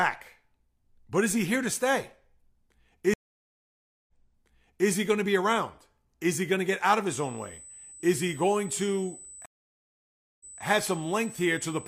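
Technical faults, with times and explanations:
3.14–4.89 s and 9.46–10.62 s, stream reconnect. The audio drops out for about 0.94 s, then 0.95 s. The connection broke and the player restarted its decoder mid-stream. The server resent a burst, so the speech resumes 0.81 s earlier, then 0.21 s earlier, repeating material.
7.10 s to the end, USB whine. A steady 8 kHz tone sits about 20 dB below the speech. USB microframes of 125 microseconds make current pulses at 8 kHz. These leak in through the power or ground as a fixed-pitch whine.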